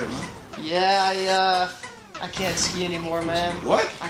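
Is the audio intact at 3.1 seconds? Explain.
No. Clock drift between sender and receiver is present throughout: the sender's clock runs roughly 4 percent fast, so the receiver's jitter buffer keeps filling. Repeated timing corrections run from 0.33 to 3.99 s, covering 3.1 s. The receiver cuts short pieces to play at about 103 percent speed, heard as small hiccups or unsteady tempo. A waveform would show small splice seams, and a spectrogram would show brief vertical discontinuities at uneven intervals.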